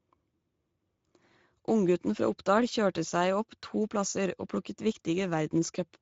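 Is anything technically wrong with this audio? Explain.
Yes. The speech runs through the Speex codec the whole way. This CELP speech codec squeezes the excitation into a small bit budget, which fits a bitrate around 16.8 kbps. That leaves it audibly hoarse and grainy, and nothing comes through above 7.7 kHz.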